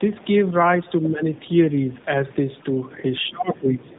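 Speech heard through tandem speech coding from start to finish. It sounds rough, muffled and warbly. Nothing reaches above 3.8 kHz. The damage points to two AMR-NB stages in a row, with a G.711 link between them, each re-encoding the previous decoder's already degraded output.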